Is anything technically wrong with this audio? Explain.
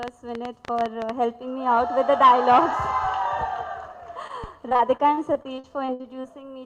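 Yes, there are three faults.

From 0.03 to 1.10 s there is a train of clicks, likely from interference from nearby equipment or a faulty connection or power supply injecting pulses. About ten similar pops arrive at an uneven pace, averaging 9.4 per second, and peak roughly 10 dB above the audio. They are heard as irregular ticking over the sound.

At 4.27 to 4.31 s there is a short concealed packet loss. About 20 ms of audio never reached the decoder in time, so the receiver extended the preceding sound to fill the hole and then blended back in. It is heard as a brief smear or wobble.

From 4.69 to 6.26 s there is repeated packet loss, giving a robotic sound. Thirteen gaps totalling about 320 ms, the longest 60 ms, were each patched by continuing the last sound, covering about a fifth of the stretch. The result is choppy audio with missing pieces.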